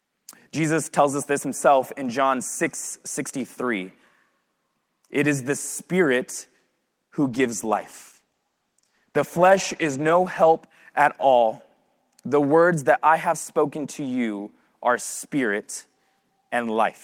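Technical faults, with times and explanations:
7.23–10.69 s, call bitrate drop: the speech goes rough and watery, with the top end dulled for about 3.4 seconds. That fits the encoder being squeezed from roughly 32 down to 14 kbps, coding coarsely and trimming highs before recovering.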